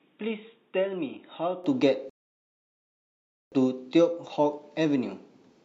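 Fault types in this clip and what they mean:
Input switched to a poorer device: The capture likely came from a lesser microphone or headset profile for the opening 1.64 s, then switched back. That stretch is dull and boxy with nothing above 3.8 kHz, sits roughly 10 dB quieter, and carries faint background noise of its own, with no gap at the changeover.
Rebuffering stall: The player ran out of downloaded audio and waited for more to arrive, so the sound drops to silence from 2.10 s to 3.52 s and then picks up exactly where it stopped. Nothing is lost, but about 1.42 s of dead air is added.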